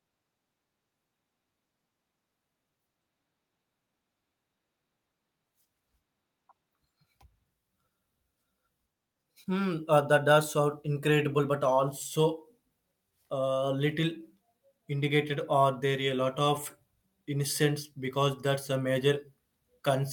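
No faults turn up anywhere in this speech recording.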